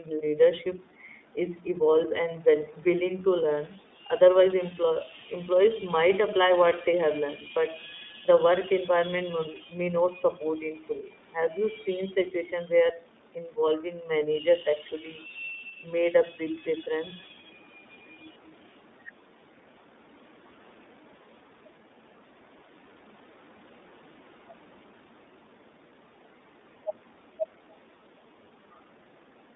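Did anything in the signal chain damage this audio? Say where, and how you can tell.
Yes. The speech sounds thin and slightly rough and synthetic across the whole clip, with nothing above about 3.7 kHz and little below 200 Hz. That is the iLBC codec at the transmission stage: it squeezes the line into a narrow band and codes each 30 ms frame independently, which fits a bitrate around 13.3 kbps.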